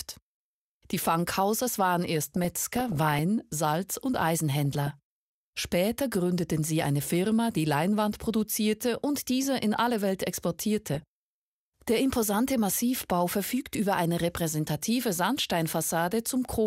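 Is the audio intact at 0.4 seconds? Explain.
Yes, at 0.4 seconds the audio is intact, with no fault present at that point.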